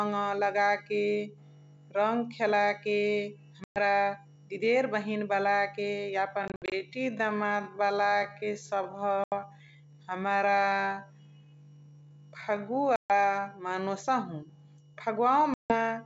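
At 3.64 s the speech drops into a hard-edged silence of 120 ms. This is packet loss on an ADPCM call: several packets went missing and were filled with nothing. The decoder's predictor and step size then restart out of step with the sender's, so the speech comes back slightly distorted and settles over some tens of milliseconds. Those recovery artefacts distinguish it from a plain dropout or a mute.

From 6.25 s to 13.87 s the pace suddenly slows to about two-thirds speed while the pitch stays put, which marks a time-stretched section and not slowed playback. The slowed speech drags, likely because short pieces were repeated to fill the length.

Within that section, at 6.48 s, the losses come in scattered gaps totalling 140 ms across 240 ms, none longer than 60 ms. A further 80 ms hole opens at 9.24 s and a 140 ms one at 12.96 s, each followed by the same brief distortion.

The last loss, 160 ms at 15.54 s, behaves the same way. 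The G.722 wideband coding at 64 kbit/s stays clear up to 7 kHz on either side of these gaps, so the holes are loss events and not codec damage.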